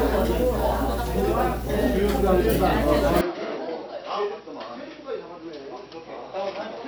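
A recording of sounds that abruptly turns dull, quieter and boxy at 3.21 s and stays that way to the end, with nothing above 5.8 kHz, a level drop of around 10 dB and faint new background noise. With no gap at the change, the cause is likely an input switched to a poorer device.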